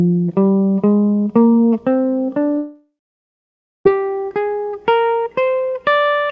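A music clip, carried over a call path whose sound stops at 8 kHz, consistent with G.722 at 64 kbps. At 2.58 s the music smears into a buzzy continuation of its last sound that fades away, leaving about 0.94 s of silence before the music returns at 3.87 s, with roughly 1.3 s of the passage simply gone. This is likely a long network dropout: no audio arrived, the receiver briefly extended the final sound to cover the gap, then gave up until audio resumed further on.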